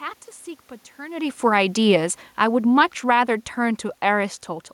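From 1.79 s to 4.56 s the automatic gain is falling: the control judged the input too loud or its background noise too strong and eased its gain down by about 6 dB. Unlike the talker's movement near one second, the room noise here sinks along with the speech.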